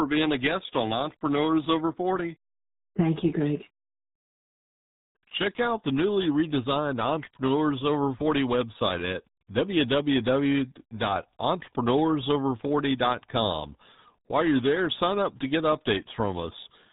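From start to finish the speech carries RealAudio 14.4 codec damage: the sound fits an 8 kbit/s dial-up coder, leaving it muffled and gargly. A spectrogram shows a hard ceiling at 3.8 kHz, with smeared, blocky energy below it.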